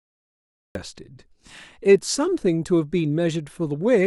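From 0 to 0.75 s there is only digital silence. The speech then begins abruptly at 0.75 s, already mid-sound. This is a cut-off start: capture began late, so the opening was never recorded. There is no natural attack or fade-in.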